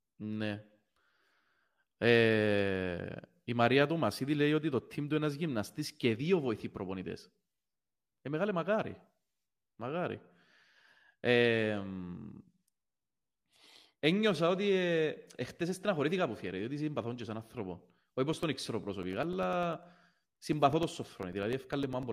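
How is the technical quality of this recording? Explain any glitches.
The recording has one clear technical problem near the end: periodic USB or driver dropouts. Between 18.33 and 22.03 s, something blocks the USB bus or audio driver every 0.1 s, so around 2 ms of speech is lost each time and replaced with silence. That adds up to some forty brief gaps, ten per second. They come through as an evenly spaced ticking or popping laid over the speech, audible only while sound is present.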